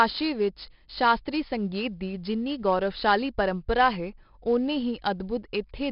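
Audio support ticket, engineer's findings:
4-bit ADPCM compression, throughout speech clip. Gritty hiss riding on every loud syllable, dropping away in pauses, with heavy damage and roughness on sharp onsets where step size lags. Nothing above about 5.3 kHz, so dull top, which fits a roughly 11 kHz sample rate and about 44 kbps stream. Differs from a fixed noise floor: the grit tracks signal level. Differs from perceptual codecs: no swirly or watery artefacts.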